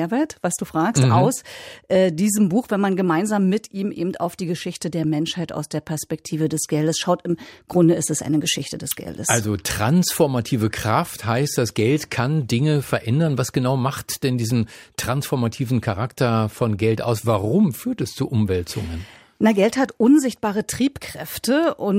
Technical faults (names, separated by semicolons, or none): none